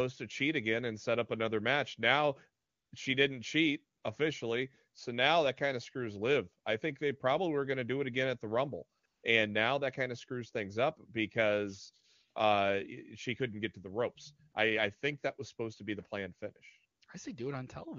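AMR comfort noise cuts in at 2.63–2.91 s, after "she didn't cheat" at 3.97–4.03 s, at 8.99–9.03 and 9.05–9.23 s, and briefly at 14.51 s after "get to the ropes". Each time, the phone stopped sending speech and the real background was swapped for smooth synthetic hiss that flicks in and out.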